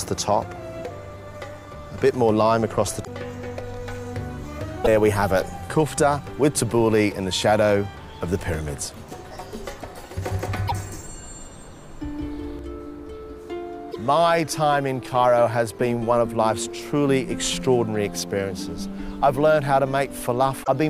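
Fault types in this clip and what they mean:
Damaged data in a compressed stream: corrupted bytes in the compressed stream make the decoder misread frames and hunt for the next valid header, so short blips of roughly 70 ms break through at 3.01, 4.81, 10.65, 13.89 and 20.61 s.
Doubled audio track: the same audio is likely being mixed in a second time through a slower path. From 10.22 to 12.59 s a full-band copy trails about 150 ms behind at roughly equal level, starting and stopping abruptly with no room colour.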